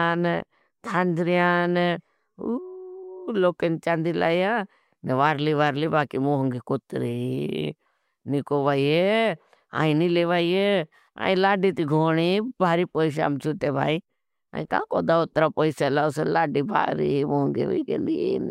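No technical faults can be heard anywhere in the recording.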